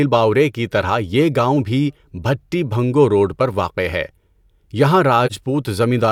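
At 5.26 s the speech drops into a short, soft-edged gap that ends by 5.32 s. This is AAC frame loss with muting. The decoder received nothing for that stretch and filled it with a zeroed spectrum. The overlapping transform windows then faded the sound down into the hole and back up out of it, leaving no hard edge. The missing span is about 43 ms, which fits a single lost frame.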